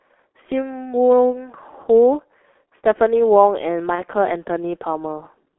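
Throughout, the speech carries the sound of the G.723.1 codec, heavily damaged at a rate that points to roughly 6 kbit/s. The line band confines everything to about 300 Hz to 3.4 kHz, so the speech is muffled and hoarse. The codec's slow update of its voice model, frame by frame, smears consonants. A spectrogram would show a hard ceiling near 3.4 kHz with empty space above it, and blurred, blocky formant tracks rather than crisp transitions.

From 3.95 to 4.04 s there is VoIP packet loss concealed by the speech codec. The lost stretch fits a single 30 ms frame. The decoder filled it by extrapolating its last pitch and filter at lowering gain, so the speech briefly turns into a fading, stretched-out sound. It stays weak for a moment after real data returns. On a waveform the envelope sags there. A spectrogram shows the extrapolated stretch before normal detail resumes.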